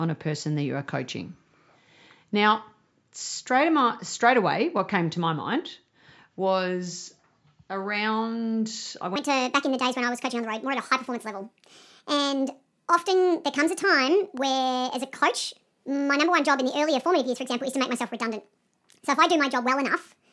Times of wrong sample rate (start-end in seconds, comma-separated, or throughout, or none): 9.16-20.32